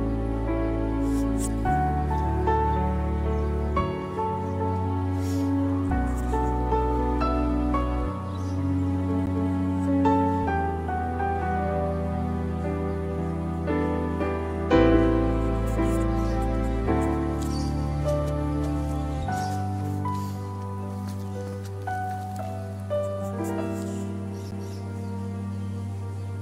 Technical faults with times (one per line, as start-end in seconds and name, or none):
9.26 CD skip
24.51 CD skip